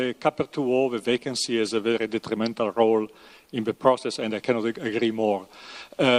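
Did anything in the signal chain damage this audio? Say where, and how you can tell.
Yes, a call bitrate drop at the codec stage, driven by the network. From 1.17 s to 4.53 s the sound turns coarse and muffled as the top end vanishes, bottoming out for about 2 s. That fits an encoder pushed from about 64 kbps down to 21 kbps.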